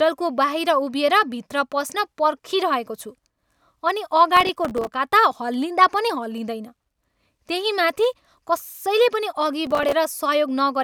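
A speech clip with processor overload crackle at 4.37–4.93 s and again at 9.67–9.93 s: many buffers of a few milliseconds miss their deadline and drop to silence, so the sound tears into gritty crackle rather than one clean dropout, then clears.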